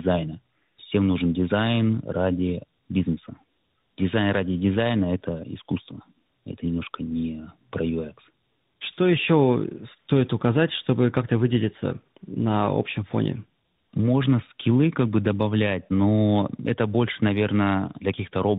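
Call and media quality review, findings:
Tandem speech coding throughout: AMR-NB 12.2 kbit/s, transcoded through G.711 A-law into G.726 40 kbit/s, two speech codecs in series. Second coder re-quantises first coder's errors. Speech rough, muffled, warbly; nothing above 3.8 kHz.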